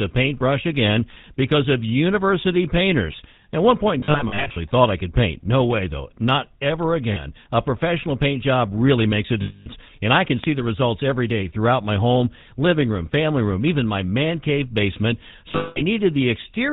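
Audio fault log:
Throughout: GSM full-rate codec. The speech has a buzzy, gravelly roughness and nothing above 4 kHz, which fits the 13 kbps full-rate coder. It rebuilds the voice from a vocal-tract model driven by regularly spaced pulses, keeping only every third excitation sample. Unlike a simple band limit, the damage is plainly audible as texture: a grainy rasp on the voice, not just a loss of brightness.
4.0–4.58 s, 7.12–7.19 s, 9.42–9.67 s, 15.52–15.81 s: lost GSM frames. Each missing stretch is filled by repeating the last good frame, so the sound holds as a rough, metallic ring instead of dropping out. The first burst scatters about 300 ms of loss over 0.56 s in short breaks. Near 7.1 s only 40 ms go. Near 9.4 s about 240 ms are lost. The last loses 220 ms over 240 ms, mostly one run of about 200 ms. Unlike a clean gap, the ringing fills the loss.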